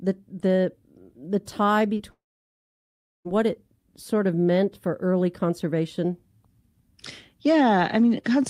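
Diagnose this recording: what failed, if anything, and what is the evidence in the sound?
Network stage: packets carrying about 20 ms of the call arrived too late for the decoder. It concealed the gap by extending the preceding sound for about 15 ms before blending back. This short concealed packet loss is heard at 1.97 to 2.01 s as a brief smear in the speech.

Network stage, likely a long network dropout: over a second of audio never arrived. From 2.11 s the last sound is stretched briefly and fades, leaving about 1.05 s of silence. Speech resumes at 3.27 s on "what it sort of", with the lost stretch gone.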